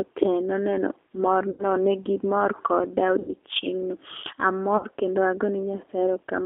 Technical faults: G.729 codec; VoIP packet loss concealed by the speech codec

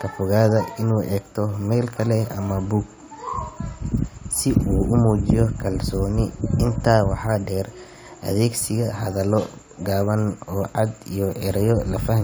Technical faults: none

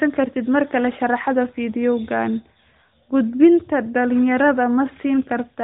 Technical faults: none

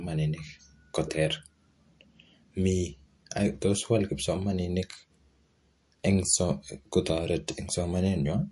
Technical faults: MP3 compression

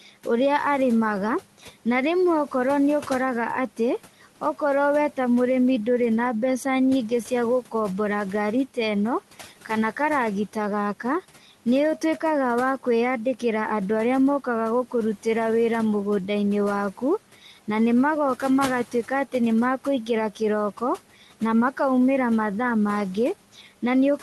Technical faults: speech cut by the noise suppressor

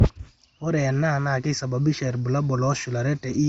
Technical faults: none

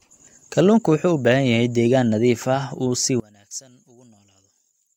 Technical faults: one channel inverted

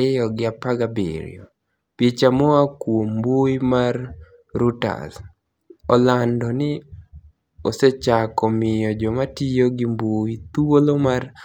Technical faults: none

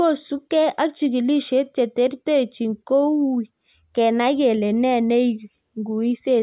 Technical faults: none

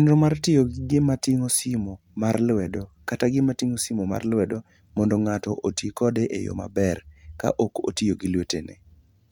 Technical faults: none

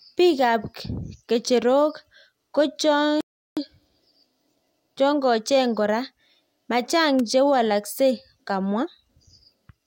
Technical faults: rebuffering stall; electrical switching spike

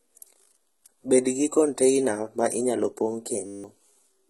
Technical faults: HE-AAC compression; system hang loop

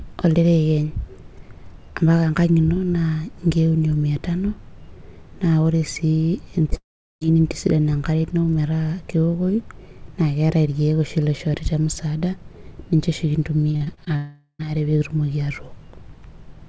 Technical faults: short concealed packet loss; long network dropout; repeated packet loss (robotic sound)

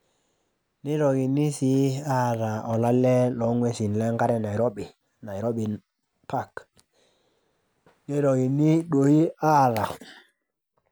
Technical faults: none

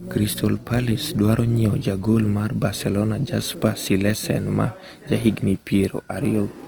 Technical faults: Opus compression

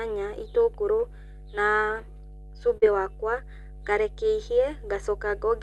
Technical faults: mains hum; short concealed packet loss

